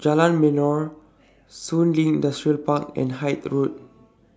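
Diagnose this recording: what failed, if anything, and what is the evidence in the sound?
Nothing in the chain failed.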